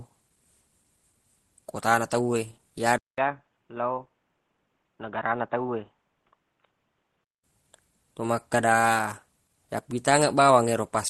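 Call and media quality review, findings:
Input switched to a poorer device: 200 ms dropout at 2.98 s, then dull, boxy speech until 7.44 s. Nothing above 3.8 kHz, level down about 5 dB, new faint noise floor around 50 dB under the speech. Likely cause is a mid-call input change to a narrowband device. Outside that span the WebRTC call path carries audio up to about 12 kHz, which fits Opus at around 20 kbps.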